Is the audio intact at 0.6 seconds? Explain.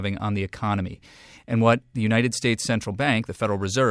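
Yes, at 0.6 seconds the speech plays through cleanly, with no dropout, click, distortion or other fault at that moment.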